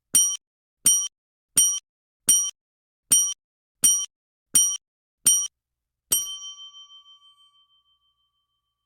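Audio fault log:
0.36–5.46 s, stutter with silent gaps: a 0.30 s burst of sound repeats seven times at a steady 0.71 s period, each repeat followed by about 0.42 s of dead digital silence. The likely cause is a stalled player or stream replaying its last buffered fragment at each retry before running dry, so the audio due in that span never arrives. The waveform shows identical blocks separated by flat silent lines, and the spectrogram shows matching columns split by empty black gaps.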